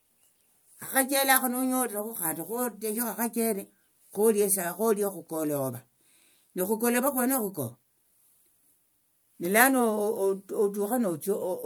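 No technical faults are audible.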